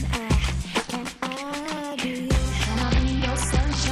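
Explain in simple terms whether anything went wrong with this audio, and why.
From about 2.83 s to 3.88 s, near the end of the clip, the sound turns dull and gritty. This is a Bluetooth SBC bit pool drop: the wireless link got crowded, so the phone sharply cut how much detail it sent, which fits a fall to a very low bit pool. The highest sounds get almost nothing and the rest is coarsened. Unlike a dropout, the audio never stops, and unlike plain muffling, it also gains a rough, grainy edge.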